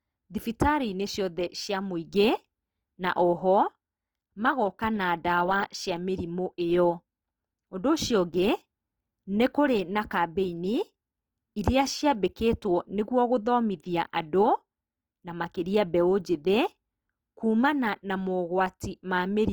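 Throughout the speech the high frequencies stay present up to about 20.2 kHz, yet the sound is grainy, rough and noise-filled: Opus compression in its CELT music mode, likely at a low rate near 24 kbps. Unlike MP3, there's little swirling, since the encoder fills starved bands instead of leaving holes.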